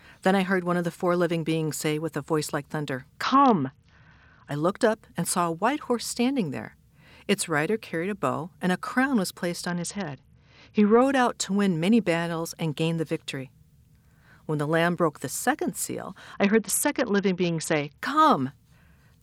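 Three times, at 3.23 to 4.51 s, 9.68 to 11.02 s and 16.34 to 17.98 s, a Bluetooth SBC bit pool drop dulls the treble and adds grit, which fits a bit pool falling from 28 to 7.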